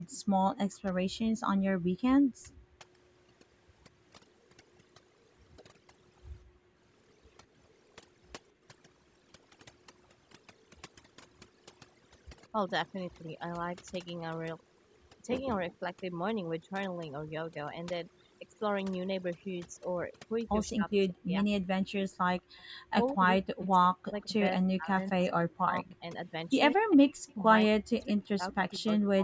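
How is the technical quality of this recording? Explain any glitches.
The quality is pretty rough. It's speech run through call processing, and there's heavy-handed cleanup plus echo-canceller trouble in several places.

Overdone noise removal runs through the whole clip. The noise reduction was set far too aggressively, so any frequency band sitting near its noise estimate gets pushed way down or switched off, and the quieter parts of the voice go with it. You hear the background drop away and break up into little twinkling specks. The top end also stops at about 8 kHz, which is just the call path's normal bandwidth.

Background gated by the echo canceller shows up twice. The first is a short dip from 0.00 to 0.05 s, about 21 dB deep. The second is a bigger one between 6.44 and 8.63 s, reaching about 39 dB and adding up to roughly half a second of affected audio. In both cases the canceller clamped the mic while the loudspeaker was playing, so the room tone sinks or drops out briefly and then comes back when it lets go.

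Speech suppressed in double talk hits from 0.33 to 2.84 s and again from 20.7 s to the end. In the first stretch the voice dips, dulls or cuts out in pieces for roughly 0.7 s in total. In the second stretch it's closer to 4 s. The deepest drops are around 40 dB. The likely cause is both sides talking at once: the canceller couldn't separate the near talker from the loudspeaker echo, so it turned everything down.

Echo leak appears as a faint delayed copy of the voice, trailing by 181 ms. There's a brief scrap from 2.50 to 2.57 s, roughly 35 dB below the speech. A longer, slightly stronger stretch runs from 20.68 to 28.79 s, around 30 dB down. It's likely coming from a speakerphone on one end whose echo canceller didn't fully remove what its mic picked up, so the residue got sent back.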